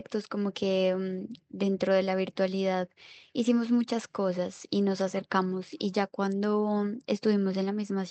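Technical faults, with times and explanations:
No technical faults detected; the speech comes through the call path with the codec's band-limit at 8 kHz.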